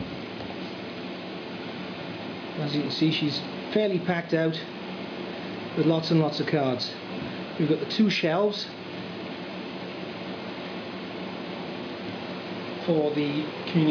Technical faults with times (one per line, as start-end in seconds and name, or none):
none